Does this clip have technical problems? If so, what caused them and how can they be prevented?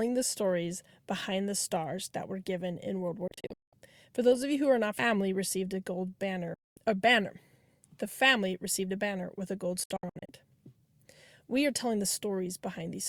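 Yes. The speech has digital broadcast dropouts at 3.28–3.73 s, 6.54–6.77 s and 9.84–10.29 s. Failed frames mute the receiver with a 3 ms fade. The first and last are clusters of short holes; the middle is one 224 ms gap. Stronger reception or better error protection prevents this.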